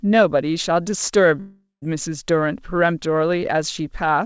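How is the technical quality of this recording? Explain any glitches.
One glitch stands out in this speech, a long network dropout from 1.40 to 1.84 s. About 0.42 s of audio never arrived, likely through lost packets. The receiver stretched the last sound into a fading buzz. Near silence follows for about 0.15 s. Speech then resumes without the missing stretch. Throughout, nothing is heard above 8 kHz, which fits a G.722 call codec.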